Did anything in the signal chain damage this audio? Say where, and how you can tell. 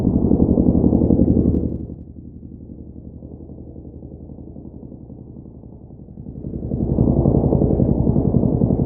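Yes. Zipper noise from a gain stage at the buffer level, 1.53 to 2.05 s (fading roughly 20 dB down) and 6.10 to 7.03 s (back up). Fine ticking at about a hundred steps a second rides the fades, unlike a smooth fader move.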